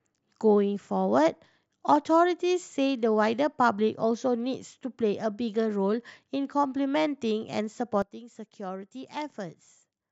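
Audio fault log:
8.02–10.11 s, sudden gain jump. At 8.02 s the speech drops by about 12 dB in a single step and stays down to the end. There is no fade. The background noise falls by the same amount at the same instant, so the whole signal was scaled, not just the voice. This points to a digital gain setting applied between one sample and the next without a ramp, likely from a level change or bit shift in the processing chain.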